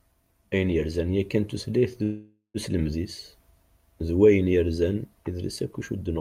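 Speech with a call audio freeze from 2.03 to 2.57 s, right after "yerzan yakan tutlayt d": the last sound smears into a fading buzz or hiss, the final 130 ms go silent, then speech resumes intact, likely a drained jitter buffer. Unlike a dropout, nothing is lost; the rest of the clip just arrives about 0.5 s late.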